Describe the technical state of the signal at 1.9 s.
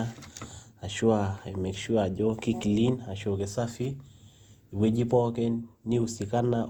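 At 1.9 s the speech carries generation loss, present across the whole clip: a swirly, hollow smear with blurred consonant attacks, likely from about four rounds of Opus coding at 64 kbit/s, each requantising on a shifted frame grid. Unlike a single low-bitrate encode, content still reaches about 20.1 kHz.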